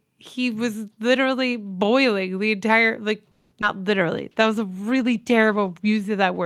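Just after "boiling the entire like", from 3.31 to 3.53 s, a call audio freeze stretches the last sound into a fading buzz for about 200 ms. Packets were likely held up and the jitter buffer ran dry. Playback resumes where it stopped, with nothing lost and the delay now 200 ms longer.

A short concealed packet loss follows at 3.61 to 3.78 s. About 40 ms of audio never reached the decoder. The receiver bridged it with a brief synthesized continuation, heard as a quick smear. Buffered delay shrinks by roughly 30 ms.

From 4.17 to 6.09 s a call bitrate drop takes the encoder from 64 to 20 kbps, held at the floor for about 1.85 s. The coarser coding leaves the speech rough and watery until the rate recovers.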